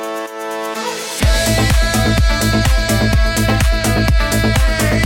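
No technical faults can be heard anywhere in this audio.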